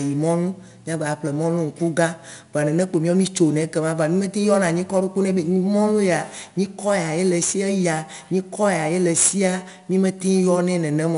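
From start to finish the speech carries 4-bit ADPCM compression, with plainly audible damage. Coding each sample as a coarse 4-bit step from a prediction leaves a gritty hiss riding on every loud syllable and roughening sharp onsets. Nothing sounds above about 10.6 kHz, which points to roughly 22 kHz sampling at about 88 kbps.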